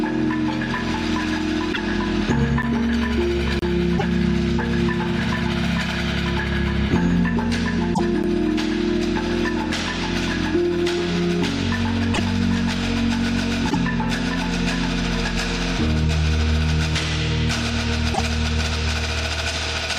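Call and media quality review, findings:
Short disturbances of about 60 ms at 1.72–1.78, 3.97–4.04, 7.93–8.00, 12.13–12.20, 13.69–13.76 and 18.13–18.20 s: the audio jumps ahead and the frames after each cut come out garbled. Each span covers a few units that fit 24 ms MP3 frames. Likely a broken MP3 bit reservoir: frames were dropped, so the following frames reach back into the reservoir for borrowed data and decode bytes belonging to other frames.

Dropouts to digital silence. Abrupt cut and return with no fade. A 10 ms gap at 2.62 s and another at 8.23 s, each too short to read as silence, heard as a tick or dip. A 30 ms gap at 3.59–3.62 s, long enough to be a short hole. Mechanism: a block of digital silence replaces the audio. The output buffer was not filled in time or a calculation produced invalid values; the sound alone does not settle which.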